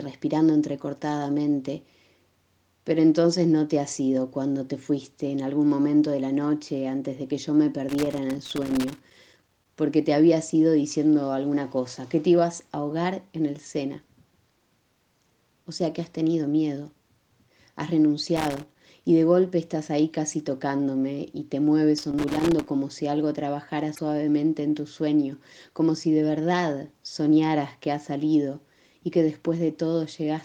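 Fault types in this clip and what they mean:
Loose connector crackle, 7.89 to 9.69 s, 18.37 to 18.79 s and 21.98 to 22.68 s: a worn or dirty contact keeps making and breaking as it shifts, chopping the signal into irregular bursts of scratchy crackle, nearly two seconds long in the first burst and shorter later.
Damaged data in a compressed stream, 23.92 to 23.99 s: corrupted bytes in the encoded stream leave the decoder unable to read those frames, so it loses sync and hunts for the next valid header, producing a brief blip lasting about 70 ms.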